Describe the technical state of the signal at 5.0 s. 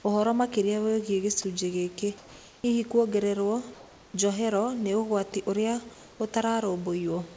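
At 5.0 s the speech comes through intact, with no fault on the signal at that moment.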